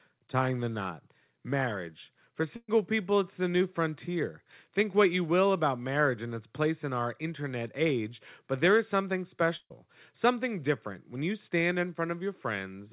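At 2.56 to 2.70 s and again at 9.56 to 9.72 s there is a burst of packet loss. In each, roughly 120 and 140 ms of audio went missing. The receiver filled the gap by repeating and fading the last sound, heard as a brief held buzz or hiss that dies into about 40 ms of silence before the sound jumps ahead. A spectrogram shows smeared, repeated bands fading to a blank strip, all capped near 4 kHz, which points to a G.711 call codec.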